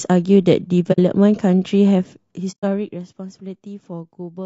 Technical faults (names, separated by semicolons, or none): low-delay AAC compression; AAC frame loss with muting